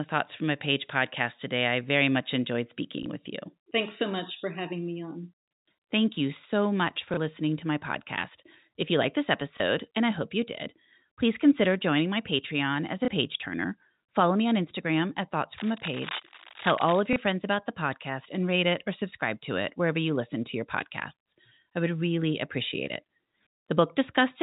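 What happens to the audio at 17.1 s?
Just before this point, from 15.58 to 17.01 s, there is cable scratch noise, most likely from a worn cable, connector or control being moved so that its contact resistance jumped about rapidly. That fluctuation injects dense, irregular bursts of noise into the signal, heard as a scratchy rustle over the speech for about 1.4 s. It sits roughly 10 dB below the speech.

Then, from 17.13 to 17.16 s, there is packet loss with the last packet repeated. About 30 ms of audio went missing, which points to a single lost packet, and the receiver filled the gap by replaying the previous chunk. That single repeat is heard as a small blip. It is set against the narrow telephone band of the G.711 coding.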